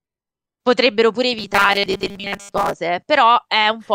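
Speech, with a stretch of robotic sound from repeated short buffers running from 1.39 s to 2.74 s. Through that span the voice collapses into a rigid, metallic buzz pitched at 200 Hz that only loosely tracks the speech. The likely cause is audio arriving too seldom, so playback keeps looping a very short fragment, about 5 ms given that pitch, and for most of the stretch the real signal is skipped.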